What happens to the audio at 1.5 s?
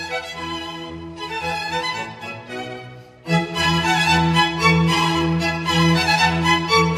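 Nothing goes wrong at 1.5 s; the audio plays through that moment intact, with no dropout, click or other fault.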